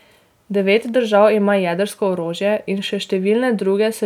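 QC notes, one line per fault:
No faults detected.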